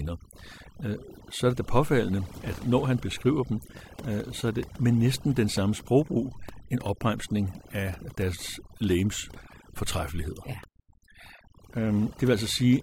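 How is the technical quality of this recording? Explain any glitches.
The technical quality is compromised by overdone noise removal, present throughout. A noise reduction stage set far too strong switches off narrow frequency bands near its noise estimate. Quiet parts of the speech vanish with them. Pauses sink to near silence with twinkling specks.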